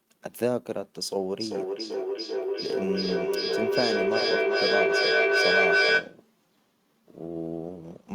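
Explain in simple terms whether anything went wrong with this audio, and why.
Two devices in the same room were on the same call, causing a feedback echo between two devices. One device played what the other's microphone sent, that microphone picked it up again, and neither echo canceller could remove sound it hadn't played itself. From 1.4 s to 6.2 s the speech keeps coming back about every 0.4 seconds, each repeat thinner and more ringing. The repeats pile up until they are louder than the speech itself.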